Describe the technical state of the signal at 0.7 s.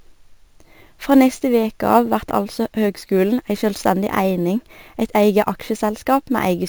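At 0.7 s the speech has imaging from sample-and-hold upsampling, present throughout. Each sample was repeated unfiltered from 16 kHz to 44.1 kHz, mirroring the spectrum into 8 to 16 kHz at about -23 dB as metallic fizz. Spectrograms show flipped formants above 8 kHz. Waveforms show stair steps.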